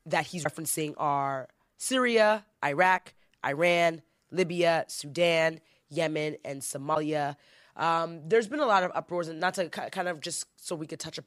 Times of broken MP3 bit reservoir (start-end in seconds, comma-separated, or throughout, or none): 0.43-0.46, 2.97-3.00, 6.94-6.96